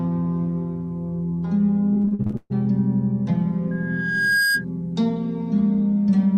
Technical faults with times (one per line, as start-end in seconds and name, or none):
1.93-2.52 repeated packet loss (robotic sound)
3.71-4.65 loudspeaker feedback squeal